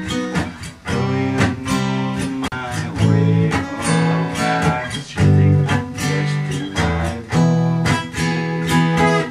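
Intermittent contact at 2.46 to 2.52 s: a loose connection in the signal chain briefly lost contact, so the sound drops out for about 40 ms inside a disturbance lasting roughly 60 ms. As the contact scrapes open and closed, crackle marks both edges of the gap, and while the circuit is broken only a faint hiss remains where the sound should be, before the full signal snaps back as contact is restored.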